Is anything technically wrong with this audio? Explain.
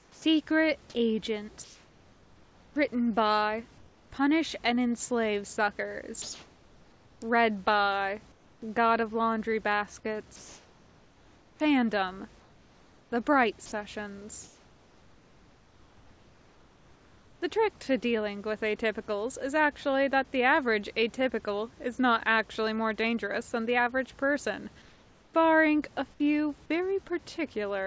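Yes. The audio shows three kinds of voice-detector fault.

Sound dropped by the voice detector occurs at 0.00–0.24 s and again at 13.66–13.72 s. The sender likely judged real sound to be background and stopped sending, so about 110 ms and 50 ms of sound give way to steady synthetic noise before transmission resumes.

Comfort noise in place of the background appears at 1.64–4.12 s, 6.22–8.62 s, 10.36–17.42 s, and 24.82–25.34 s, the last just after "than the average person". During pauses the sender likely went into discontinuous transmission, and the receiver filled the gaps with featureless generated noise instead of the real room noise. In the final gap that noise is about 6 dB quieter than the surrounding background.

An onset clipped by the voice detector occurs at 25.30–25.34 s, right after "than the average person". The detector was likely slow to register that sound had resumed, so roughly 40 ms of the start was never sent and the sound begins abruptly, without its soft onset, over the band-limited call audio that stops at 8 kHz.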